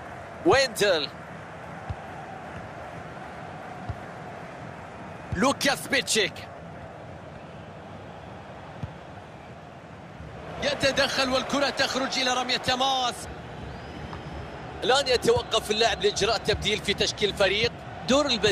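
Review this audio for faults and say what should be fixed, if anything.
Nothing here needs fixing, since no faults turn up anywhere in the recording.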